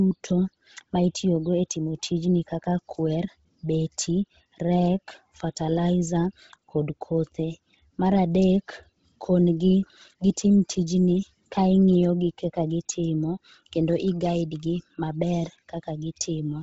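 Throughout, the audio was likely squeezed through Bluetooth LC3 compression at a low bitrate, consistent with roughly 16 kbps. With heavy codec damage, the speech has a breathy, grainy edge where upper detail was zeroed and noise-filled, and nothing remains above 7.8 kHz.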